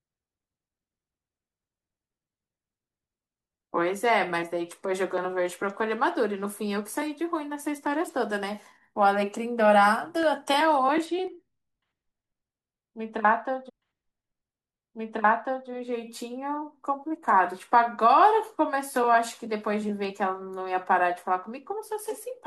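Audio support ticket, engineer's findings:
Clicks at 7.87, 10.23, 11.27 and 20.05 s, likely dropped samples. Roughly a fraction of a millisecond of audio missing each time, so the waveform jumps and produces a single sharp click.

Channel delay (comb filtering) from 11.05 to 15.93 s. One channel lags by a couple of samples. The mono sum cancels evenly spaced frequencies, starting at around 10 kHz, which dulls the top end.

Stream segment repeated from 13.68 to 15.68 s. The player queued the same segment twice, so 2.0 s of audio plays again, with a small blip at the jump back.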